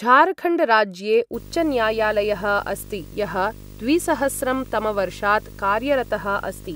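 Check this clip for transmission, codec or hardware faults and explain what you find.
There's one hardware fault here. From 1.34 s to the end, video or display buzz: a screen or cable couples in, giving a 50 Hz buzz with hash, a 15.6 kHz whine, fairly strong under the speech.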